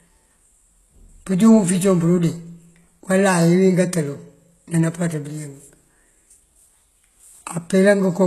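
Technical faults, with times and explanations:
Throughout, HE-AAC compression: sibilants sound gritty and metallic, with nothing above 12.3 kHz, likely treble rebuilt by band replication at a heavily squeezed rate near 16 kbps.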